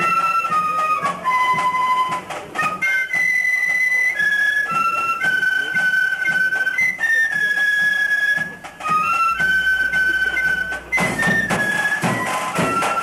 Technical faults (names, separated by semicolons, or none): mains hum